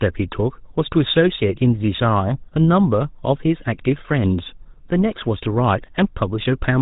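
Speech, with GSM full-rate codec damage from start to finish. The voice sounds buzzy and gravelly. Nothing comes through above 4 kHz. The codec models the vocal tract and feeds it a coarse pulse excitation, consistent with the 13 kbps GSM full-rate coder.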